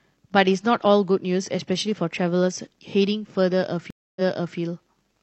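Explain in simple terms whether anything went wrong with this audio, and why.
Something did go wrong, at about 3.90 s. That's a stream reconnect: the connection dropped, so the speech cuts to silence for roughly a quarter of a second while the player reconnects and restarts its decoder. When the sound returns, it picks up about 0.42 s earlier than where it stopped, so you hear a short stretch repeated as the server resends a chunk. The first moment back is muted or fades in, and the whole hiccup is over by about 4.58 s.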